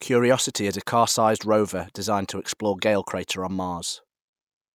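Listening closely to the speech turned up nothing that stood out as a technical fault at any point.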